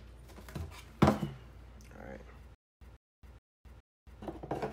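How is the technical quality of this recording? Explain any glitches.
There is one clear glitch, from 2.55 to 4.22 s: a stutter with silent gaps. The same short burst of sound, about 152 ms long, plays four times at a steady rhythm, each followed by roughly 267 ms of dead digital silence, so it repeats every 419 ms. The likely cause is a stalled player or stream that replayed its last buffered fragment at each retry and then ran dry. Whatever should have played during that stretch is missing.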